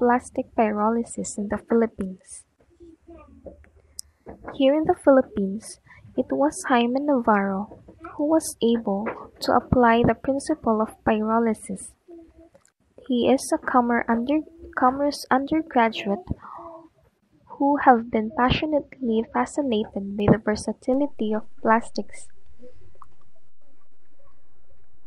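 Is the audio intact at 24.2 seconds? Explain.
No. At 24.2 s the clip is inside a DC step that begins at 20.94 s and lasts to the end of the file. The waveform's zero line jumps by about −32 dBFS, as when a converter recalibrates or an offset input is switched in. The jump is heard as a low thump or click at 20.94 s, and at 24.2 s the signal still sits on the displaced baseline.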